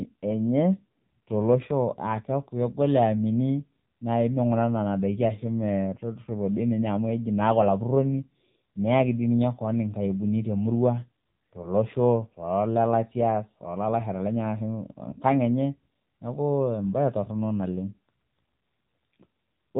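From start to finish the speech carries AMR narrowband mobile codec damage: nothing above 3.8 kHz survives, and the voice turns buzzy and synthetic, which fits a low AMR-NB mode near 7.4 kbps. Unlike a plain telephone band-limit, the pulse-driven vocal-tract model adds that artificial, reedy texture.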